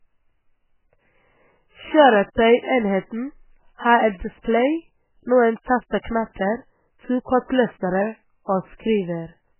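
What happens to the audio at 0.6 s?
At 0.6 s, as throughout the clip, very low-bitrate MP3 compression has likely starved the speech of bits, cutting everything above 3 kHz and leaving a dull, watery, swirling sound.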